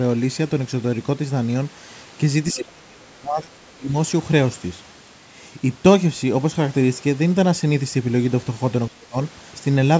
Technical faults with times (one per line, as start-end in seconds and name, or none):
2.54-3.94 speech suppressed in double talk
8.89-9.16 speech suppressed in double talk